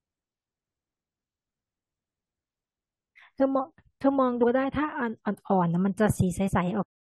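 Compressed frames skipped at 6.47–6.49 s in this speech clip: the audio jumps ahead about 50 ms, consistent with two missing 23.2 ms frames. Cut-off end at 6.83 s: the final buffers never played, so the speech stops mid-sound and falls straight into digital silence with no natural decay.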